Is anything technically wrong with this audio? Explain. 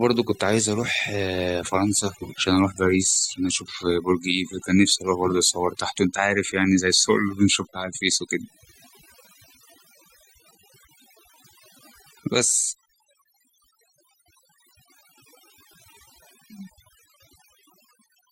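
Yes. Throughout the speech, overdone noise removal is audible: the noise reduction was set too aggressively, so frequency bands near its noise estimate are pulled down or gated off. Background becomes near-silence with twinkling specks, and quieter voice detail vanishes.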